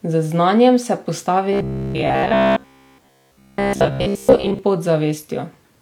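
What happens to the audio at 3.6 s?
At 3.6 s the speech is a rigid, metallic buzz pitched at about 66.7 Hz. It still roughly follows the talking but has lost its natural texture. This robotic sound from repeated short buffers runs from 1.53 s to 4.59 s. The likely cause is audio arriving too seldom, so the playback fills the gaps by looping the most recent fragment. The 66.7 Hz pitch fits a buffer of about 15 ms, and most of this stretch is repetition rather than fresh audio.

Underneath, and present at this moment as in the whole clip, is low-bitrate audio saved at a high bitrate. The file is an MP3 with content reaching up to about 20.1 kHz, yet it carries the artefacts of an earlier low-bitrate encode. That pattern likely comes from an HE-AAC source at around 48 kbit/s being re-encoded at about 256 kbit/s. The larger second file cannot restore what the first encode discarded.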